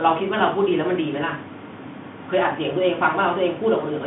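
Speech heard through a Bluetooth CVSD headset codec for the whole clip: the line is confined to roughly 150 Hz–3.5 kHz, and a spectrogram shows a hard ceiling at 3.8 kHz with nothing above. Plainly audible one-bit delta coding adds granular hiss, fitting a 64 kbit/s CVSD link.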